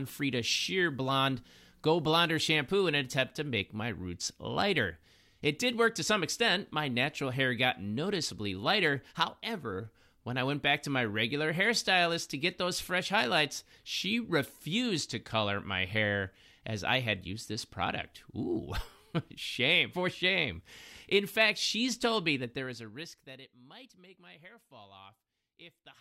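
From 22.34 to 23.53 s the speech picks up a rapid ticking, a zipping texture, as the level falls by roughly 25 dB. This is zipper noise: the fade moves in unsmoothed 2 dB jumps, around fifteen a second, and each jump clicks.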